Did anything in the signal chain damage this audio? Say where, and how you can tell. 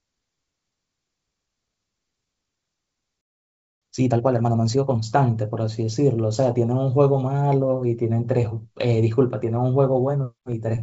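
Yes. A playback stall runs from 3.21 s to 3.82 s. The speech stops mid-flow and the output falls completely silent for about 0.6 s, then resumes. That silent hole inside continuous speech points to the playback or buffer stage. The likely cause is the player's buffer running empty, or its audio thread being blocked, so that nothing reached the output until it recovered.

Time-compressed catch-up follows from 3.82 s to 5.02 s. Speech plays at about 1.5 times normal speed with pitch unchanged. This is still the playback stage. Having fallen behind during the stall, the player drains its backlog by removing small slices and blending across the joins. That hurries the delivery without shifting the pitch. The band limit at about 7 kHz fits the G.722 wideband call path this audio travelled through.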